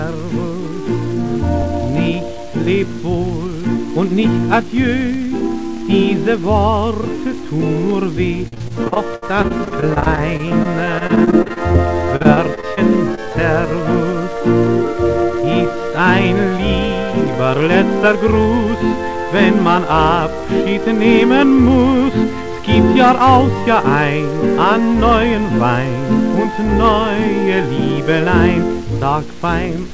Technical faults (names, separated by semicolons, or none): repeated packet loss (robotic sound); short concealed packet loss